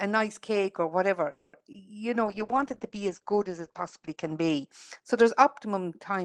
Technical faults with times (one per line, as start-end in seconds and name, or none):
1.31-1.55 call audio freeze
1.59-1.82 short concealed packet loss
2.26-5.46 call bitrate drop